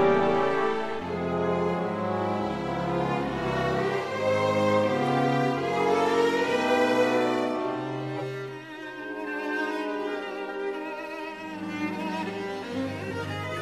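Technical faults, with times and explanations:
8.16 to 8.22 s, corrupt frame decoded: flipped bits in a couple of compressed frames went undetected, and the decoder rebuilt them from wrong gains and misread codes. This put energy at false frequencies, heard as a chirp, squeak, blip or noise burst of about 60 ms peaking around -20 dBFS.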